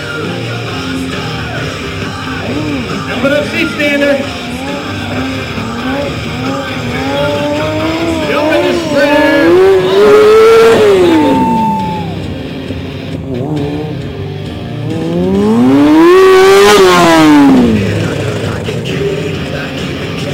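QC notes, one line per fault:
throughout, sample clock jitter: a fine hiss and roughness rides on the sound, growing with loud and high-pitched passages and vanishing in silence. The converter's clock wanders by around 5 µs, mistiming samples on steep waveform slopes, leaving error about 30 dB below the signal.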